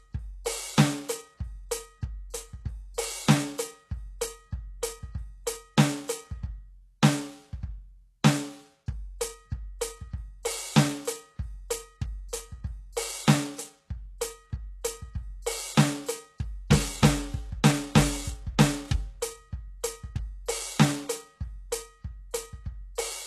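From the start and throughout, the music shows plainly audible damage of the kind HE-AAC compression leaves, likely at a very low bitrate, around 16 kbps. Nothing sounds above 12.3 kHz. The upper treble is rebuilt from copied lower bands, so it sounds gritty and metallic.

At 2.94 to 2.98 s there is pre-echo, lasting 37 ms. A sharp attack landed late in a coding block. Its noise spread backwards into the quiet before it. A brief hiss leads in, and the attack sounds smeared.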